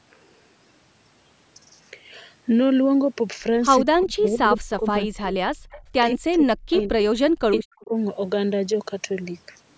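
From 3.8 to 5.52 s the speech sinks and breaks into pieces, losing well over a second in total and falling by a very large amount at its deepest. This is speech suppressed in double talk. It is likely caused by the echo canceller failing to tell the talker apart from the loudspeaker echo while both sides spoke, so it turned everything down. The same dips return from 6.12 to 6.95 s and from 7.13 to 7.91 s, each losing most of a second.

Over and between these stretches, delayed copies of the speech are heard, trailing the original by about 175 to 180 ms. They come at 4.25 to 4.29 s at about −15 dB, 5.71 to 5.82 s at about −25 dB, 6.72 to 7.04 s at about −15 dB, and 7.53 to 7.6 s at about −10 dB. This is echo leak. Its likely cause is a far-end loudspeaker whose echo canceller let part of the pickup return, band-limited like the rest of the call to nothing above 8 kHz.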